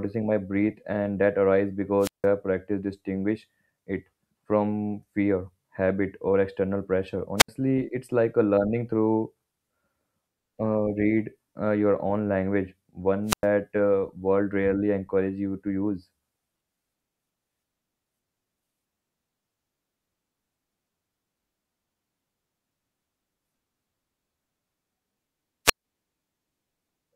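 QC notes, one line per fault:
2.00–2.26 s, 7.37–7.49 s, 13.26–13.45 s and 25.65–25.85 s, wireless microphone squelch dropout: the speech is interrupted four times by a short surge of hiss and static, then a gap of near silence lasting about 168 ms, 71 ms, 102 ms and 151 ms respectively, before the speech returns. The radio link from the analogue FM microphone weakens until the receiver's squelch gates its output shut, so the noise rises as the signal fades and the audio cuts out entirely until reception recovers.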